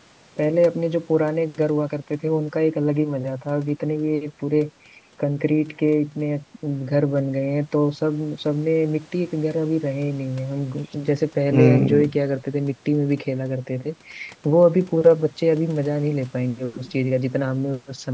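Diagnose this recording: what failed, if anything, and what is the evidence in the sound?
Nothing failed; the call processing is behaving as intended.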